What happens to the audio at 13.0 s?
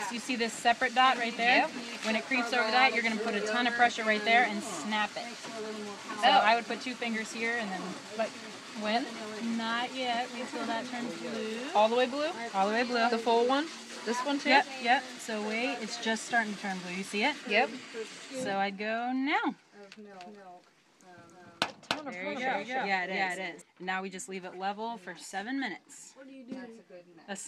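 Nothing goes wrong at 13.0 s; the audio plays through that moment intact, with no dropout, click, glitch or other fault.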